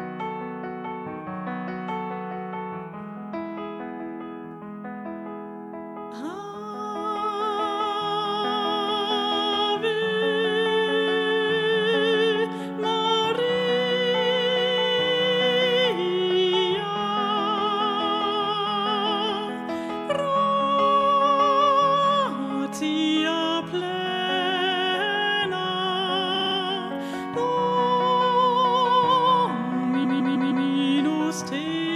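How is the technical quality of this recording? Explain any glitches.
Two stutters from repeated frames mar the recording. At 26.35 s, a short run of compressed frames, about 52 ms of audio, was passed to the decoder again and again, so that snippet plays four extra times through 26.56 s, adding 209 ms. At 30.03 s, a longer 157 ms block repeats four more times through 30.66 s, adding 627 ms. Each loop sounds like a rapid skip.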